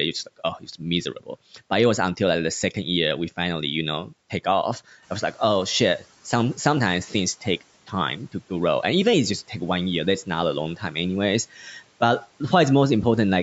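Just after "you know take off", at 5.02 s, the room noise jumps by about 10 dB and the noise suppressor is caught up short: its noise estimate lags, so the louder noise passes with less reduction at first, then sinks by about 10 dB as the estimate adapts, settling by 6.08 s.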